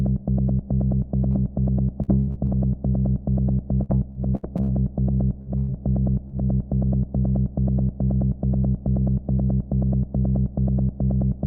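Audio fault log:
1.31, 5.42 and 6.28 s: short concealed packet loss, about 20 to 40 ms lost each time and patched by carrying the last sound forward, so you get a quick smear or wobble.
2.02 to 2.49 s and 3.83 to 4.70 s: repeated packet loss (robotic sound), four then five gaps in quick succession, each patched over, giving choppy sound with bits missing.
5.58 to 5.70 s: burst of packet loss, about 100 ms gone in one go, the last sound held and faded as a buzz or hiss before the audio picks up further on.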